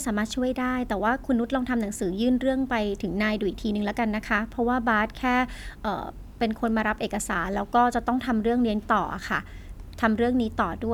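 Nothing stood out as a technical problem when listening to this speech recording.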